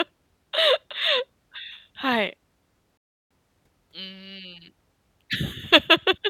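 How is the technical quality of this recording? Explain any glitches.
The speech has one glitch, a rebuffering stall from 2.97 to 3.31 s. Playback ran out of downloaded audio and waited for more to arrive, so the sound drops to silence for about 0.33 s. It then resumes exactly where it stopped, with nothing skipped and that gap added to the running time.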